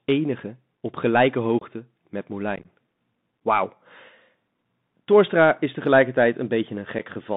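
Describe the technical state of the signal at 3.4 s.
At 3.4 s the speech sounds narrow and boxy, with scratchy s sounds and a grainy hiss underneath, as it does throughout the clip. That is the Bluetooth CVSD headset codec: a one-bit up-or-down coder whose adaptive step lags loud high content, and whose line passes only about 150 Hz to 3.7 kHz.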